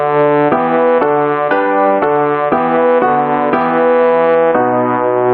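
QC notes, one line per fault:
Throughout, gain pumping: the input gain was likely set far too high, so a fast limiter or compressor clamps down on each loud moment and lets go in the pauses. The gain swings by around 5 dB, which leaves loud and quiet passages squeezed close together and the whole sound flattened and breathing, over a call path whose top end stops near 12 kHz.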